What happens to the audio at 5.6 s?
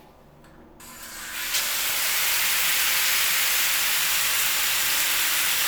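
At 5.6 s the sound carries on intact, with no dropout, click, distortion or other fault at that moment.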